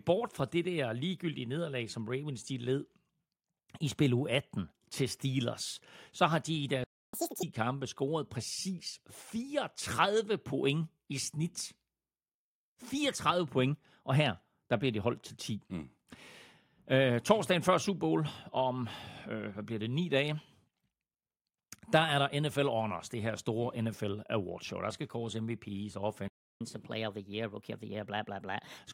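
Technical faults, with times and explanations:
6.84 to 7.14 s, playback stall: right after "så har de i" the speech cuts out for 0.29 s of silence mid-flow, likely because the player's buffer ran dry or its thread was blocked.
7.14 to 7.43 s, catch-up at higher speed: the speech resumes at double speed and jumps roughly ten semitones higher. The player is resampling its backlog to recover the lost time. Normal pitch returns at "kampe scoret præcis".
26.28 to 26.61 s, playback stall: a second gap, 0.33 s long, where the speech falls silent before continuing. It likely has the same cause, with the output starved of data or blocked.
26.61 to 28.78 s, catch-up at higher speed: a gentler recovery. The speech runs at 1.15 times normal speed, about two semitones sharp, for over two seconds while the backlog drains, then settles.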